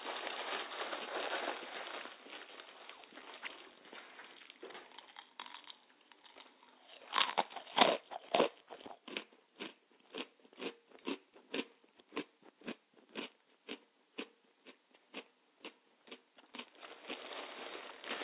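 Nothing in this sound recording stands out as a technical fault, so there's nothing here to flag.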